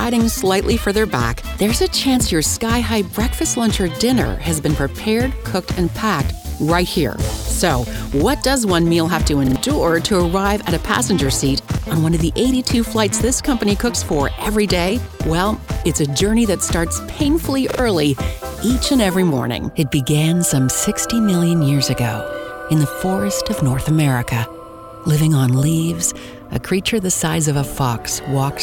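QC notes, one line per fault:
9.47–9.56 s, 11.73–11.78 s, 17.71–17.79 s, repeated buffer: a 43 ms piece, which fits a 2048-sample buffer, replays twice, then once, then twice with hard joins, so it stutters rather than going silent as a dropout would. Roughly a tenth of a second, then about 40 ms, then a tenth is lost.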